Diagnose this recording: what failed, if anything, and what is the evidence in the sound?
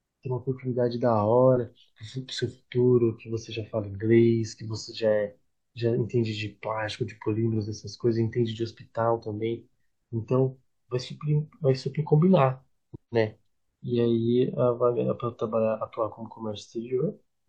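Nothing in the speech signal points to a failure at any stage of the chain, from capture and conversion through transmission, storage and playback.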